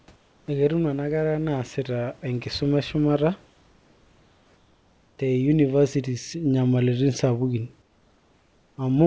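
At 0.16 to 0.48 s, 3.46 to 5.18 s and 7.82 to 8.78 s, the real room background in the pauses gives way to comfort noise: a flat, featureless hiss about 3 to 4 dB quieter than the room sound around it. The likely cause is discontinuous transmission, where the sender goes quiet during pauses and the receiver fills them with synthetic noise, so the background seems to dip and smooth out until the talking resumes.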